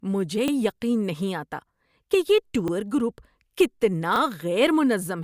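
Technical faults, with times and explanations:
0.48–0.52 s, 2.68–2.72 s and 4.16–4.20 s: repeated buffer. At each of these three points a 40 ms stretch of the speech plays twice in a row, heard as a brief stutter with a hard join where the copy begins. New audio did not reach the playback device in time, so it played the last block again, which fits a 40 ms buffer. The timeline is delayed by the repeat, and little or no audio is skipped.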